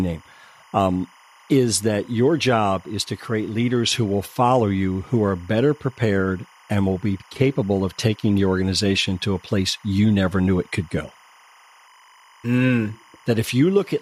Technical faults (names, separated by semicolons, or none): timecode bleed